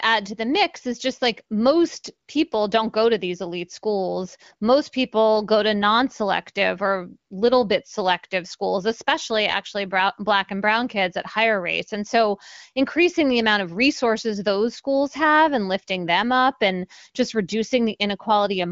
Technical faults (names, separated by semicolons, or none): none